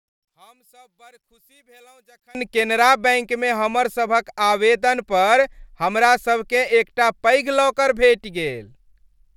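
From 0 to 2.35 s the speech nearly vanishes, about 34 dB down, until "केनरा बैंकमे हमर सभक": likely one channel inverted, cancelling in mono.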